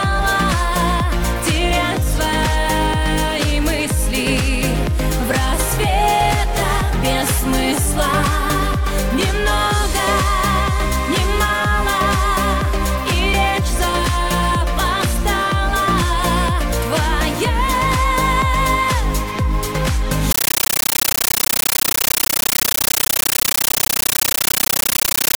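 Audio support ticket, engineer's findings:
From 20.31 s to end: sound replaced by very loud chattering static. Compressed stream played as audio. AC-3 bitstream passed undecoded over the digital link. 13.3 ms noise bursts plus zero padding, repeating at 31.25 Hz. Consistent with a 640 kbps stream.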